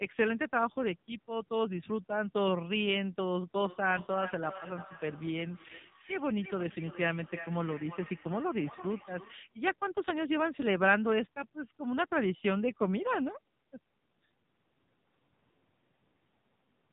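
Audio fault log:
throughout AMR narrowband mobile codec: nothing above 4 kHz, and heavy buzzy, synthetic speech from a sparse pulse-driven vocal-tract model, which fits a 5.9 kbps mode.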